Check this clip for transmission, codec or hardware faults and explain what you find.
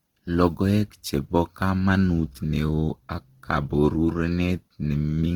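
One codec fault runs through the whole speech clip: Opus compression. The damage is plainly audible from start to finish. The cause is likely the Opus music (CELT) mode at a low rate, which fits roughly 16 kbps. Starved of bits, the encoder keeps each band's energy but refills detail by folding lower bands or with noise. The speech therefore sounds grainy, rough and hissy rather than swirly. A spectrogram shows fullband content up to about 20.1 kHz, with smeared, noise-like texture replacing fine harmonic structure.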